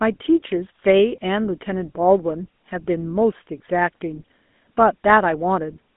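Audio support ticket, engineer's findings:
GSM full-rate codec, throughout: buzzy, gravelly roughness on speech, band about 200 Hz to 3.6 kHz, nothing above 3.8 kHz. The roughness separates it from plain narrowband filtering, consistent with 13 kbps.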